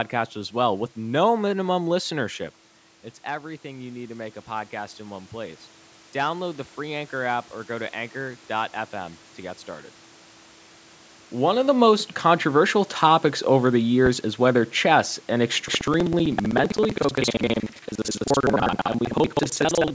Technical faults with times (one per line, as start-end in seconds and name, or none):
3.25-5.66 automatic gain rising
14.06-14.21 phantom power thump
15.68-19.94 buffer tearing